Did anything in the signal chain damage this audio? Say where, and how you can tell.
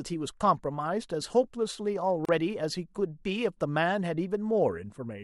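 Yes. The speech drops out for about 35 ms, from 2.25 to 2.29 s, with its edges smeared by the codec, and then resumes exactly where it stopped, with nothing skipped. This is a gap at a join of encoded pieces, introduced at the codec stage. The audio was encoded in separate pieces and joined without trimming, so the encoder's start-up delay and the padding of the previous piece's last frame remain as silence at the seam.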